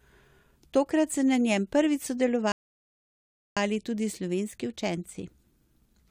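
At 2.52 s the speech drops into a rebuffering stall: playback starves for data, falls silent until 3.57 s, then resumes exactly where it stopped, adding about 1.05 s.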